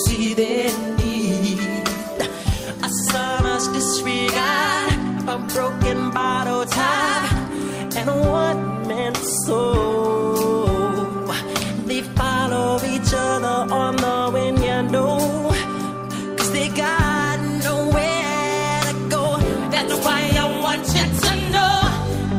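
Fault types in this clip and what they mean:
No fault types can be heard in this clip. Nothing in the audio calls for an entry under any heading.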